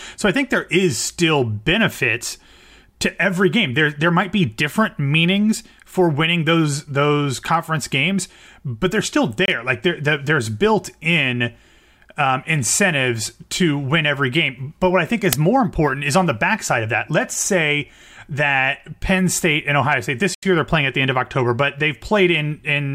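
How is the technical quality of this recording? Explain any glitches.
The recording has three glitches: two short dropouts and one loud crack.

At 9.46 s, right after "games but they're still", the sound cuts out for about 25 ms, and again at 20.35 s for about 82 ms, just before "year they're playing at". Both are likely a Bluetooth stall: packets got held up, the headphone buffer ran empty, and playback paused until they arrived.

At 15.33 s, between "what I think" and "more important is on", there's a brief, loud crack. That's an uninitialised buffer, where leftover memory was played as audio. Its 5 ms length fits a 256-sample block.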